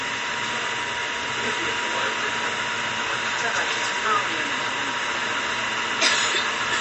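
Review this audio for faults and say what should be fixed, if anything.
MP3 compression is likely throughout the clip: nothing is present above 9.1 kHz, and weak spectral detail flickers on and off between frames, giving a watery, swirly texture with smeared attacks. This fits an MP3 encode starved of bits, around 40 kbps. To prevent it, keep a lossless or uncompressed master and encode at a higher bitrate.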